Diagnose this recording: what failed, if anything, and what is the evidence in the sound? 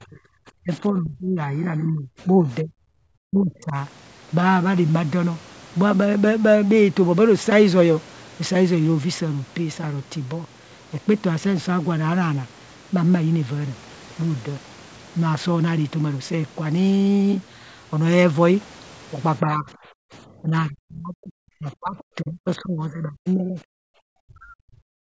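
The talker's speech gets pushed down in chunks, which is most likely speech suppressed in double talk by the call's echo canceller. You hear it at 0.0 to 0.2 s, 0.59 to 3.75 s, 19.42 to 19.69 s, 20.42 to 23.57 s, and from 24.17 s to the end. The dips run from mild to something like 40 dB in the worst spots. With both ends talking, the canceller can't tell near speech from loudspeaker echo, so it attenuates everything.

The room tone gets clamped twice, at 19.97 to 20.12 s (down about 40 dB) and at 23.85 to 23.89 s (down about 38 dB). That's background gated by the echo canceller. It's the same call-processing stage. The canceller hears the loudspeaker, decides the mic is mostly echo, and slams the gain shut briefly, so the ambience just vanishes for a blink and comes back.

Right in the middle of that long suppressed stretch, around 21.98 to 22.03 s, there's a faint scrap of a second voice, sitting roughly 30 dB under the main speech. 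That sounds like the other side's voice leaking through. The far end is played on the talker's loudspeaker, bleeds into the mic, and the echo canceller doesn't fully subtract it, so a short residue of that voice survives into the outgoing signal.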